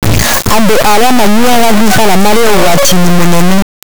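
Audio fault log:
throughout, integer read as float: the 32-bit integer speech samples are interpreted as 32-bit float, so values land near zero or far past full scale. The result is a harsh, very loud buzzing square wave that drops out in quiet passages. The waveform slams between silence and clipping, and the spectrogram shows dense broadband harmonics.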